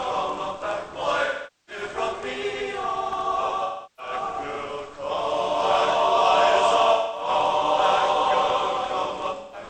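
AAC frame loss with concealment occurs at 1.25–1.82 s, 3.64–4.13 s, 6.92–7.29 s and 9.35–9.63 s, with gaps of roughly 0.43, 0.34, 0.21 and 0.17 s. The decoder rebuilds each gap from the last good spectrum, producing a smeared, noisy or phasey patch.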